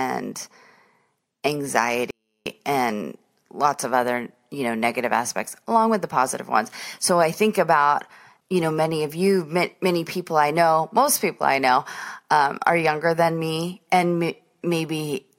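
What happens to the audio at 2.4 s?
At 2.4 s the speech is inside a 24-bit alignment error, from 2.11 to 2.46 s. Low-byte 24-bit samples are read as 32-bit, so it drops about 48 dB, nearly silent, recovering before "and lots of other".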